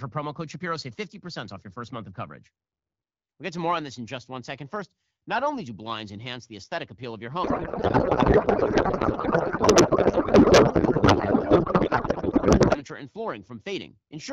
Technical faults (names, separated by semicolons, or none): codec payload misread